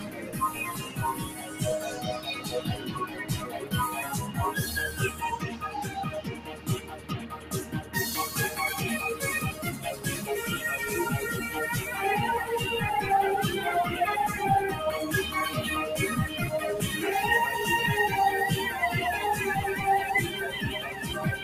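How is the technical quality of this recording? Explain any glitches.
Not great. A speech noise suppressor is running over the whole thing, and it fights the material rather than cleaning it.

Throughout, that noise suppressor applied to music or sounds treats sustained content as noise, so the level swings by something like 10 dB and the sound pumps and thins.

In places it bites harder, and you hear sound cut by the noise suppressor: held parts sink and tails get clipped short. This happens at 0.0–0.99 s (about 8 dB down), 1.18–1.61 s (about 7 dB), 1.91–2.6 s (about 7 dB), 2.76–3.7 s (about 8 dB), 5.41–5.7 s (about 9 dB), 6.16–7.96 s (the worst, about 10 dB), 9.52–10.06 s (about 7 dB) and 20.87–21.02 s (about 6 dB).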